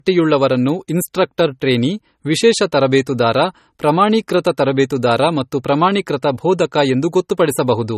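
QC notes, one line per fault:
throughout, low-bitrate audio saved at a high bitrate: the speech has the coarse, watery texture of a heavy MP3 encode and nothing above 14.6 kHz. Likely an MP3 near 32 kbit/s re-encoded at a high rate, which keeps those losses and that cut-off.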